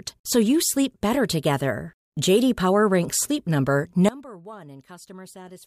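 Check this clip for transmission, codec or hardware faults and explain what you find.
One fault: a sudden gain jump at 4.09 s, where the speech drops by about 21 dB in a single step and stays down to the end. The likely cause is a gain setting applied without a ramp. Unlike a fade or noise gate, background noise falls together instantly.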